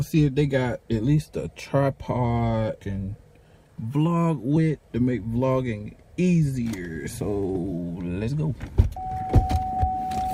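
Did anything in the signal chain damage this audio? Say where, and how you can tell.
Yes, network jitter buffer speed-up: from 3.37 to 3.76 s the sound hurries at 113% with pitch unchanged, as the receiver trims roughly 50 ms of pitch periods.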